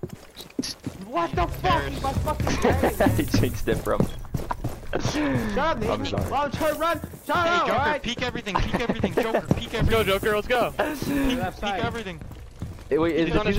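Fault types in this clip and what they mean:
No technical faults can be heard anywhere in the signal.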